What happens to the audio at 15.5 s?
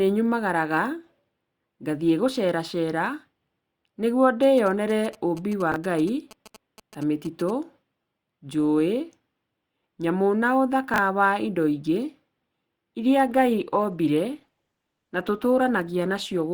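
The adaptive stream switched to a lower bitrate from 13.28 s to the end, as the connection slowed. The sound points to a drop from Opus at 64 kbit/s to 16 kbit/s. Quality changes abruptly with no gap: codec artefacts rise.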